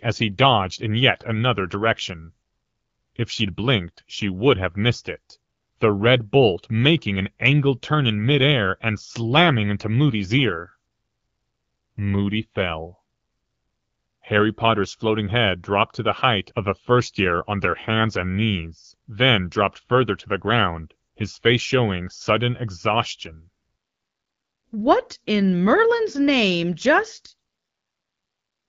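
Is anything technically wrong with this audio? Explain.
No, nothing stood out on listening to this speech, which comes through the AMR wideband (HD Voice) codec at 12.65 kbit/s.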